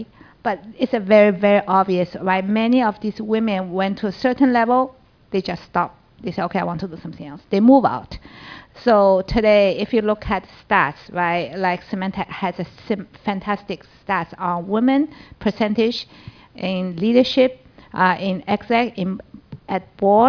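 No technical faults can be heard anywhere here.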